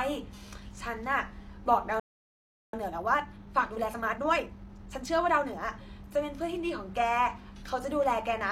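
At 2.00 s the speech stops dead in mid-flow. This is a playback stall. The output goes silent for about 0.74 s, until 2.73 s. The player most likely ran short of buffered data, or its output thread was blocked for that time. When sound returns, the speech goes on.

From 2.73 s to 5.65 s comes time-compressed catch-up. The player works off the backlog the stall left behind. It drops short slices of the signal and cross-fades the joins. The speech runs at about 1.25 times normal speed, but the pitch does not rise. It sounds hurried. After 5.65 s the pace returns to normal.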